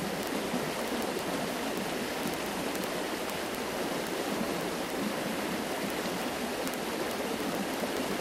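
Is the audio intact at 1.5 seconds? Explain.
No. At 1.5 seconds, sharp ticks of uneven strength recur roughly every 20 ms across the span from 0.11 to 8.20 s. These are word clock ticks: the receiver runs on its own clock, about 0.1 percent off the sender's, and drops or repeats one sample at each slip.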